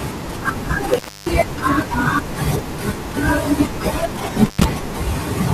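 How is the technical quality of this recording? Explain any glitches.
The speech is broken twice by an intermittent contact. From 0.94 to 1.31 s, and again from 4.46 to 4.64 s, a loose cable or plug briefly opens. The signal drops out for about 280 ms, then about 80 ms. Crackle marks each break, with faint hiss in the gap.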